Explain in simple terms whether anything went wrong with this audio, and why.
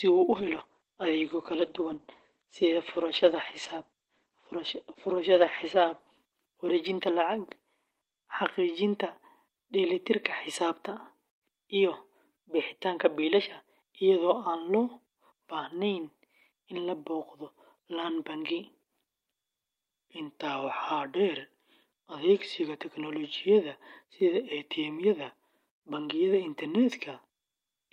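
From about 0.33 s to 9.25 s the speech sounds rough and muffled, with a watery edge, and it is at its worst for about five seconds in that stretch. This is a call bitrate drop. The call's connection seemed to weaken, so the system told the encoder to squeeze the sound into far less data. It coded the speech more coarsely and cut everything above about 8 kHz, removing the crisp top end until the connection recovered.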